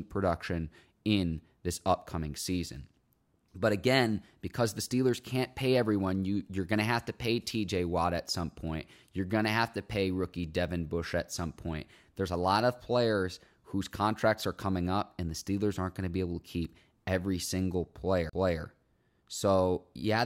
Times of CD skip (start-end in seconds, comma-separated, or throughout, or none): 18.29-18.33